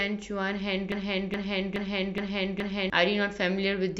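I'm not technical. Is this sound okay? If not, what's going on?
No. Something in the playback or streaming chain most likely stalled at about 0.92 seconds and kept resending the last short piece of speech it had. The result is a broken-record loop: the same fragment of about 0.42 seconds plays five times in a row, back to back, until about 2.9 seconds. Whatever should have been heard during those two seconds is gone, replaced by the stuck repeat.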